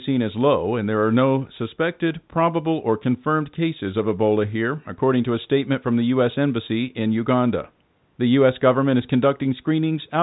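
No technical faults can be heard in the speech. It has the narrow band of G.711 telephone coding, with nothing above 3.9 kHz, after passing through the call's microphone processing.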